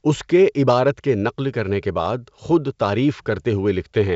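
No faults present in this speech recording; the G.722 wideband telephone path is audible as speech extending to about 7 kHz, with any codec hiss in the upper band faint at most, consistent with the full 64 kbit/s mode.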